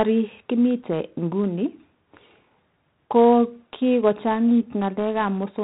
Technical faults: 4-bit ADPCM compression

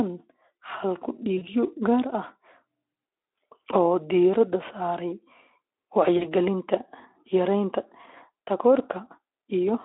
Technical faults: VoIP packet loss concealed by the speech codec

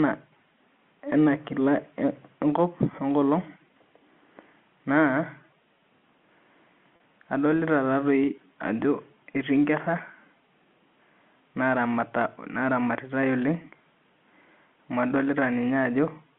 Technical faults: packet loss with pitch repetition

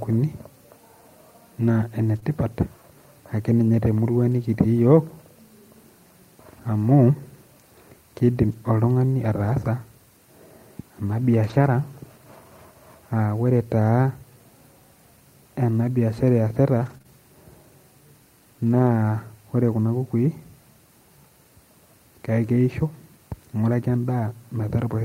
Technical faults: lost packet rebuilt from error correction; short concealed packet loss

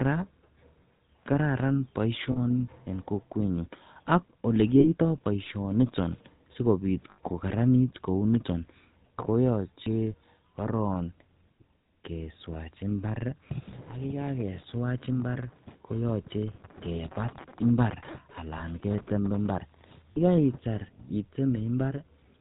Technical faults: GSM full-rate codec; lost GSM frames

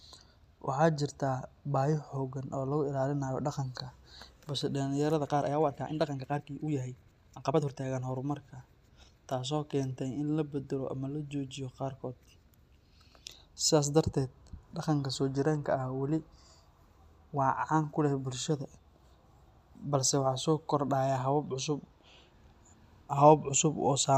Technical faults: time-stretched section

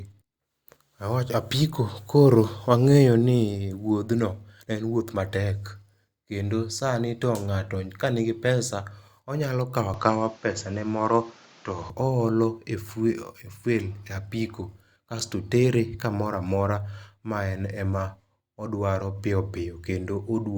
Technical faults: input switched to a poorer device

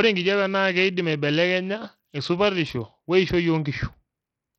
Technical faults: Bluetooth SBC compression

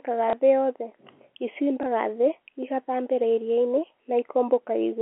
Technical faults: packet loss with last packet repeated

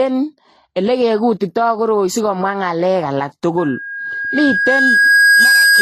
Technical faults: transcoding between lossy codecs; loudspeaker feedback squeal

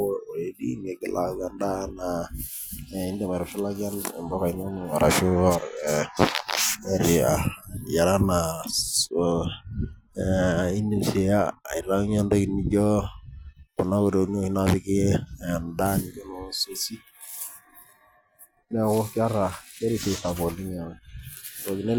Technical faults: de-emphasis applied wrongly

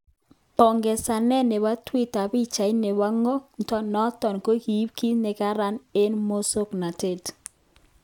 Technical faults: none

